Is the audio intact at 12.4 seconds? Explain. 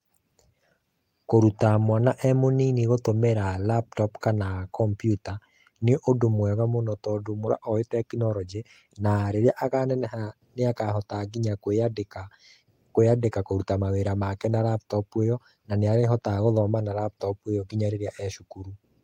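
Yes, at 12.4 seconds the speech plays through cleanly with no audible fault.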